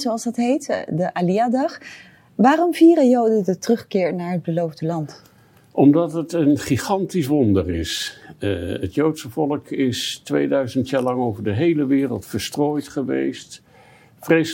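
Nothing is technically wrong with the audio in this clip.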